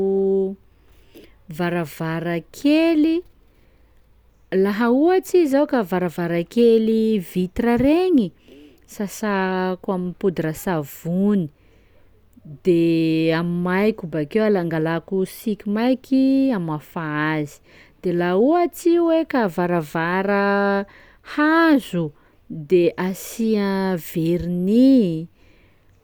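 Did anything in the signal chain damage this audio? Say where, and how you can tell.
No, nothing audible in this speech points to damage at any stage of the signal chain, from capture and conversion through to playback.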